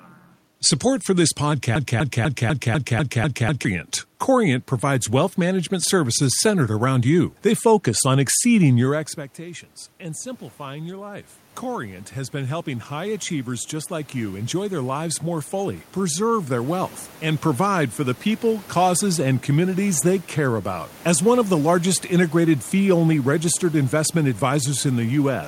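At 1.76 s the audio sticks in a broken-record loop. A fragment about 0.25 s long plays eight times in a row, back to back, until 3.65 s. Each repeat is identical, so it sounds like a stutter. The likely cause is a stalled player, encoder or stream that kept resending the last piece it held. Whatever should have played in those two seconds is gone.

From 8.9 s to 19.9 s the automatic gain is rising. Around 9 s the talker moves away, and the input drops by about 17 dB. The gain control hears this as too quiet. It slowly adds about 16 dB to compensate. The voice creeps back up over those eleven seconds. The room noise behind it swells at the same rate, so the background grows louder along with the voice.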